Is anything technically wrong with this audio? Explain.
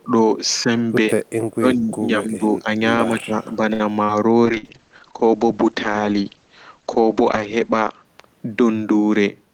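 Yes, there are four kinds of problem, all within the first 8.1 s or so of this speech clip.

Speech suppressed in double talk: the level dips four times, at 1.11–1.4 s, 1.57–1.92 s, 2.18–2.67 s and 3.17–3.59 s, by around 10 to 20 dB at worst. This is likely an echo canceller that can't tell the near talker from loudspeaker echo and ducks both.

Short stall from a late packet: at 3.73–3.83 s a sound gets held for about 63 ms. The jitter buffer ran dry, so the receiver stretched the last bit of audio until the packet showed up, then carried on. Nothing is lost, just that smeared hold.

Burst of packet loss: at 4.04–4.2 s and again at 4.57–4.66 s, packets went missing. The receiver papered over each gap by extending and fading the last sound, then picked up further along, so about 60 ms of audio is skipped each time.

Call bitrate drop: from 4.46 to 8.11 s the sound turns rough and muffled, with the top end falling from about 20 kHz to 8 kHz. 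The bandwidth estimate sank, so the encoder switched to coarse, low-rate coding, something like 40 down to 9 kbps.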